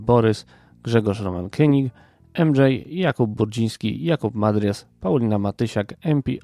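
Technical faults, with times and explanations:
No technical faults are audible in the speech.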